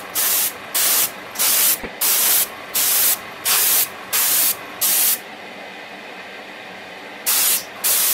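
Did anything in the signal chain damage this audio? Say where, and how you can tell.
Yes: corrupt frame decoded, at 1.75 to 1.89 s, 5.31 to 5.36 s and 7.45 to 7.50 s, a codec-stage fault. Each is a brief chirp or noisy blip unrelated to the surrounding sound, peaking at about -15, -20 and a loud -5 dBFS. Flipped bits in compressed frames were decoded anyway, so misread gains and codes put energy at wrong frequencies. The lengths suggest a few damaged frames first, then a couple each.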